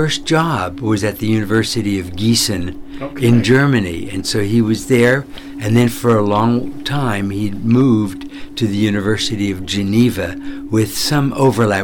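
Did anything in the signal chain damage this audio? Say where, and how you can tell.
Yes, there's hard clipping throughout the clip. The signal is driven about 6 dB past what some stage could pass, most plausibly the converter input or a conversion into a fixed-point format, so the peaks get sliced flat. Only a small fraction of samples, well under one percent, actually hit the ceiling, so you hear it as crackle riding on the loudest moments rather than constant fuzz. Those squared-off tops throw extra harmonics high up the spectrum.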